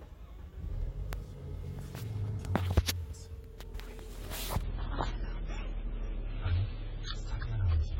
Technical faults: adaptive stream at a lower bitrate

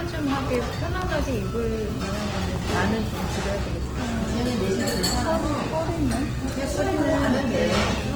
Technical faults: Opus compression

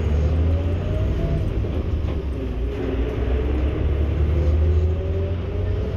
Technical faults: none

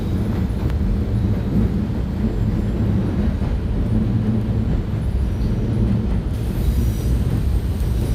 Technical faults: pre-emphasis left on

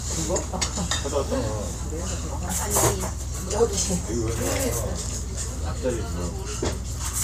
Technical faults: none

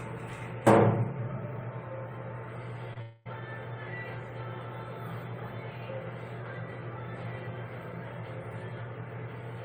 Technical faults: short concealed packet loss; long network dropout

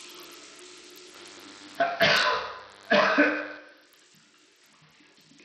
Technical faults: Bluetooth SBC compression; DECT cordless phone buzz

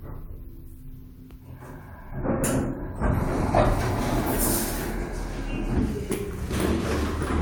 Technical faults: none

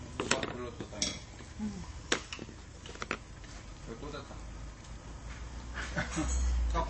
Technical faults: MP3 compression

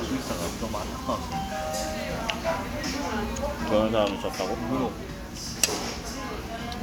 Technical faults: none

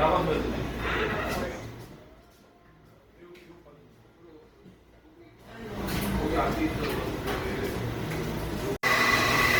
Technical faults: Opus compression

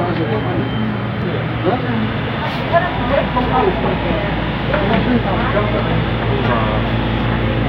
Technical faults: none

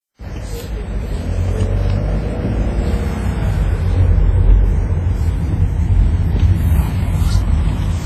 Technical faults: low-bitrate audio saved at a high bitrate

